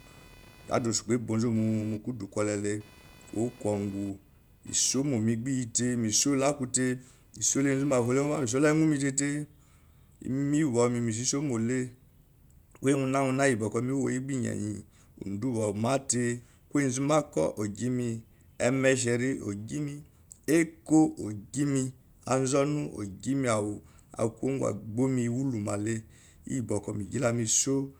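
A thin, buzzy chirping sits under the speech from the start until 8.44 s, pulsing at a rate of around 500 per second and roughly 30 dB below the voice, and it rises and fades on its own schedule rather than with the talking. This is computer activity noise: shifting load on the processor, graphics hardware or mouse disturbs the ground shared with the audio circuitry, and that interference leaks into the recording.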